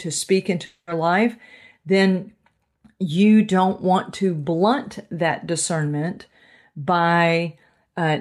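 From 0.65 to 0.89 s the speech breaks into a buzz or hiss that fades over about 0.22 s, followed by a short silence before resuming at "life then" with a piece missing. This is likely a long network dropout, with the receiver filling the gap.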